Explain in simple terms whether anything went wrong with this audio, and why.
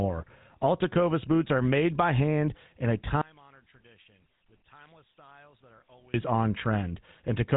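The whole recording has passed through the GSM full-rate codec, the old mobile-phone speech coder. It rebuilds the voice from a rough model of the throat and mouth fed by spaced-out pulses, which gives the speech its buzzy, gravelly edge from start to finish. Nothing above about 3.8 kHz survives, so the sound is muffled like a phone call. A plain phone-band filter would sound dull but smooth; the gritty buzz is what points to this codec.

From 3.2 to 6.1 s, just after "by hand in a", the speech suddenly drops to a faint ghost of itself and then returns. The likely cause is one channel inverted: one side of the stereo pair was flipped upside down, so when the two sides were combined into one, the centred voice cancelled itself out. A simple volume dip would keep the voice's fullness at a lower level. Here the body of the voice disappears and only a faint trace remains.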